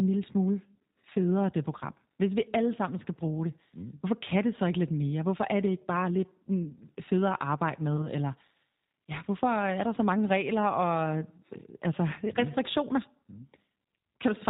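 Throughout the speech the G.729 codec is plainly audible. The decoder rebuilds each 10 ms frame from a vocal tract filter, a pitch predictor and a few sparse pulses at about 8 kbit/s, so the sound comes out slightly rough and synthetic. On a spectrogram all energy stops sharply near 4 kHz, and harmonics look smeared and grainy rather than cleanly striated.

VoIP packet loss concealed by the speech codec appears twice, from 1.13 to 1.17 s and from 7.97 to 8.08 s. Each gap fits a single lost 20 ms packet. The decoder stretches its last pitch and filter state and lowers the gain, so the speech turns into a brief buzzy tone or coloured noise that fades. Because each frame builds on the previous one, the distortion outlasts the gap. On a spectrogram this shows as flat, stretched bands, and on the waveform as a decaying envelope.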